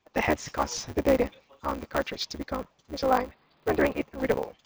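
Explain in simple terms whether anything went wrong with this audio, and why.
Yes, two things went wrong. Throughout, a block size mismatch (truncated) chops the end off every 512-sample block, causing a steady 150 Hz buzz and speech running 1.6 times too fast with its usual timbre. From 3.06 to 4.02 s the sound turns dull, most likely because the input switched to a poorer device.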